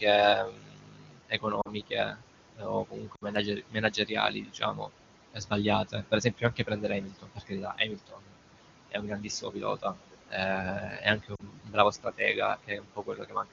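Noise suppressor artifacts run through the whole recording. The suppressor pulls the room noise, which sits about 12 dB below the speech, down by about 21 dB in the pauses, then lets it rise under the speech.

Speech cut by the noise suppressor first appears from 0.42 to 2.25 s and recurs at 2.53 to 4.93 s, 5.34 to 5.53 s, 5.84 to 8.39 s, 8.91 to 9.96 s and 10.62 to 13.52 s. The suppressor mistakes soft consonants and word tails for noise and attenuates them by up to about 22 dB, so endings sound swallowed or faint.

Lost AMR speech frames occur at 1.61 to 1.70 s, 3.15 to 3.24 s and 11.35 to 11.43 s, with roughly 40, 60 and 40 ms missing, which fits two or three 20 ms frames. The AMR-WB decoder repeats its last good settings at falling gain, so the sound drops to near silence within two frames before it returns weak or rough for a moment.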